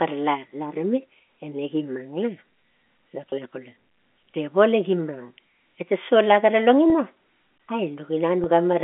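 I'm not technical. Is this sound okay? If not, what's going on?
No. There are three brief hiccups from packet loss with pitch repetition, at 3.30 to 3.32 s, 6.90 to 6.92 s just after "sola gara", and 8.44 to 8.46 s. Each time about 20 ms of sound, likely a single lost packet, went missing, and the receiver filled the hole by repeating the last bit of voice, giving a short held, buzzy blip. The whole clip travels as G.711 telephone audio, limited to the phone band of roughly 250 Hz to 3.4 kHz.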